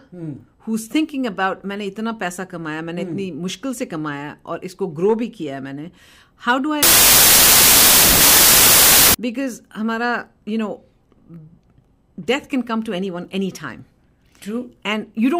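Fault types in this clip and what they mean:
Wrong sample width: bytes were grouped wrongly, fitting 24-bit data read as 32-bit, so loud noise buries the speech, which plays 1.33 times too fast.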